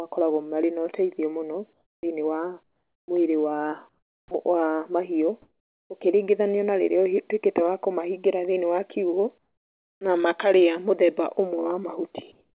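Comfort noise in place of the background appears in six pauses: 1.73–2.03 s after "mena ũteithio mũno", 2.63–3.08 s, 3.89–4.31 s, 5.42–5.90 s, 9.38–10.01 s and 12.32–12.58 s. The low background, about 48 dB under the loudest sound, turns into steady, featureless hiss. It is about 7, 15, 11 and 10 dB quieter in four gaps and about 2 and 4 dB louder in the others. This likely comes from discontinuous transmission with synthetic fill. The onset clipped by the voice detector cuts 40 ms at 3.04–3.08 s and 4.27–4.31 s before "wa mahiũ", so sound resumes abruptly without its soft start. Across the clip nothing is heard above 4 kHz, consistent with a narrowband call codec.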